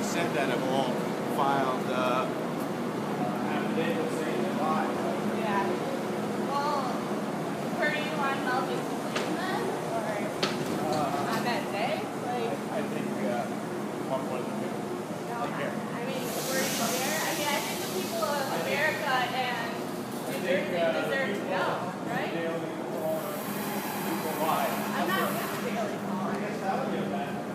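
Repeated frames at 1.55–1.57, 4.66–4.68, 16.83–16.85 and 23.26–23.28 s: a single 23.2 ms block replays once, causing a brief stutter, unlike a dropout, which removes sound.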